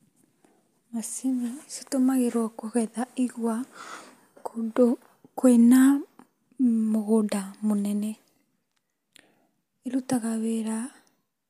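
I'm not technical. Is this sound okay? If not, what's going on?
Yes, the recording holds steady all the way along, with no dropouts, glitches or other technical trouble anywhere in it.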